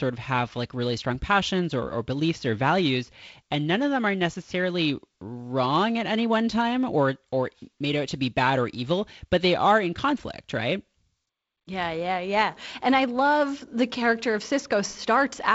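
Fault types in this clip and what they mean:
No faults; the speech runs through G.722 wideband telephone coding at 48 kbit/s, with nothing above 7.7 kHz and light coding noise from that path.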